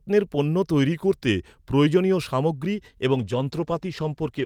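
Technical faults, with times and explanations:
0.92 to 1.87 s, drift correction step: the speech suddenly runs about 5.5% slow and drops roughly a semitone (close to 97 cents), then snaps back. That's likely a clock-matching resampler nudging the playback rate in one jump to rebalance its buffer, so speed and pitch move together.
3.11 s to the end, call bitrate drop: the bitrate falls from 48 to 14 kbps, so the encoder has far fewer bits per frame and quantises more coarsely. The speech turns rougher and watery for the rest of the clip.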